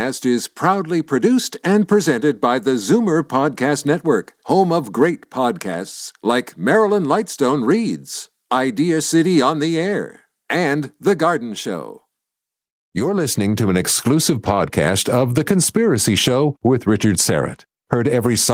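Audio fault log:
No faults heard in this speech clip.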